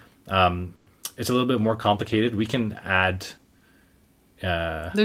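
At 0.75 s a call audio freeze stretches the last sound into a fading buzz of about 110 ms, with no true silence, before the audio resumes at "it's a". Packets were likely held up so the jitter buffer ran dry. Nothing is lost, but the delay grows by 110 ms.

At 1.02 to 1.05 s, just before "it's a", a short concealed packet loss occurs. About 40 ms never reached the decoder, and only 10 ms was synthesised from the preceding sound before blending back. The result is a quick smear, and the delay drops by roughly 30 ms.

From 1.32 to 1.60 s, right after "um it's a", a jitter buffer slow-down rebuilds the reserve by repeating single pitch periods. That adds 41 ms and plays the passage at 88% speed with unchanged pitch, so the sounds drag.

From 1.62 to 3.72 s a call bitrate drop takes the encoder from 64 to 16 kbps after the bandwidth estimate fell. It stays at the lowest rate for about 2.0 s, and the coarser coding with the top end trimmed makes the audio muffled and watery.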